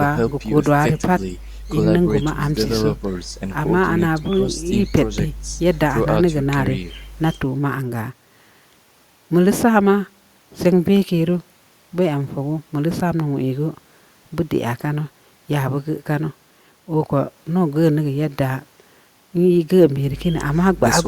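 No audible technical fault turns up anywhere in the recording.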